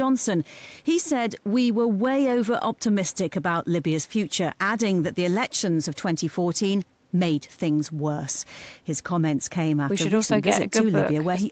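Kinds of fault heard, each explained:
No faults heard in this speech.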